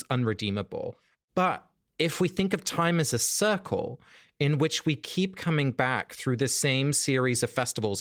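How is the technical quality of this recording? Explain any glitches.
Nothing here really trips up: the speech comes through the Opus voice coding at 24 kbps with its full band intact, and there aren't any glitches to point to.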